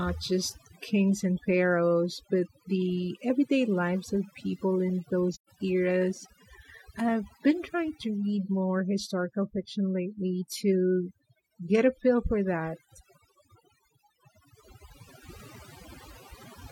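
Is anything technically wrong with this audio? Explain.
Yes, two faults are audible in this speech clip.

Throughout, there is overdone noise removal. A noise reduction stage was set far too aggressively. It suppresses any frequency band whose level sits close to its estimate of the noise floor, and it cannot tell those bands apart from the quieter components of the speech, so they are removed too. The background drops, leaving scattered twinkling specks where isolated bands flicker on and off.

From 5.32 to 5.49 s, immediately after "lives of people in", there is AAC frame loss with muting. When encoded frames fail to arrive, the decoder fills their spectrum with zeros. The overlap-add windows on either side fade the signal out and then back in rather than cutting it abruptly. About 128 ms of content is missing, which fits three lost frames. It is heard as a soft-edged hole in the speech.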